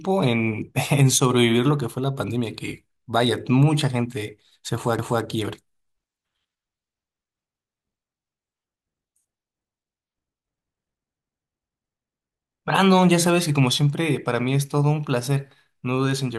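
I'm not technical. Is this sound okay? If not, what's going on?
No, there's one glitch. At about 4.99 seconds the speech stutters: roughly a quarter second plays twice, through about 5.24 s. That's overlapping chunks. The audio was handled in pieces about six seconds long, and each new piece started before the last had finished, so a little repeats at the join.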